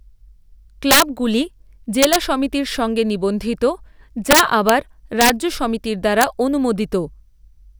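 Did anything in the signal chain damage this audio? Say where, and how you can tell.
Yes. Integer overflow in the fixed-point gain or sample-format conversion stage damaged this speech. Violent cracks land at 0.91–1.02, 2.03–2.16, 4.31–4.69, 5.21–5.30 and 6.21–6.24 s. They are far sharper than clipping. Peaks that should have been limited wrapped to the opposite sign, jumping across the full range. The overdrive is about 9 dB at the first event, about 5 dB at the third and fourth, and about 1 dB at the others.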